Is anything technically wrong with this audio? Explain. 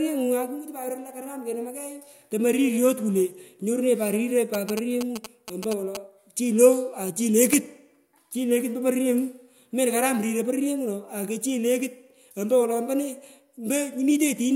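Yes, there's GSM signalling burst interference from about 4.54 to 5.97 s. A 2G phone close to the recording chain was sending short groups of radio bursts, the way a handset does when it talks to the network before a call or text. The audio electronics rectified that RF, so you hear a galloping dit-dit-dit of little buzzes at about 217 Hz, sitting roughly 10 dB under the speech.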